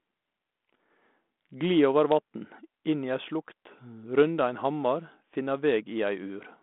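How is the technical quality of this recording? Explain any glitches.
No glitches; the speech holds steady throughout.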